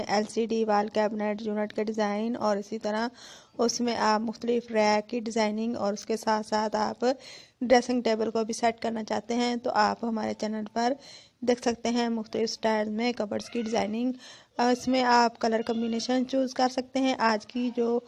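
At 6.02 to 6.04 s there are chunks out of order: one 10 ms block of audio was delivered one chunk late, so it plays after the block that should follow it. No audio is missing, but the swapped pair creates three abrupt joins where the waveform no longer lines up. The result is a brief garbled stutter in the sound, lasting about 20 ms.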